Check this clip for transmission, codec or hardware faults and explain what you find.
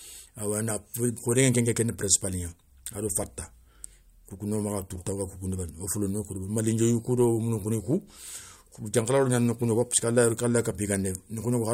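No transmission, codec or hardware faults.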